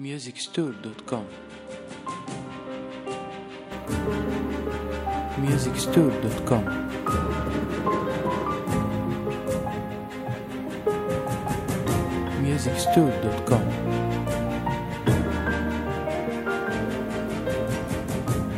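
From the start to 3.72 s the sound is duller and noticeably quieter, roughly 10 dB down, with nothing above 10.5 kHz and faint added background noise sitting far beneath the signal. At 3.72 s the full bandwidth and level return abruptly, with no gap at the changeover. This points to an input switched to a poorer device, likely a narrower-band microphone or headset profile at the outset, before the system moved to its normal input.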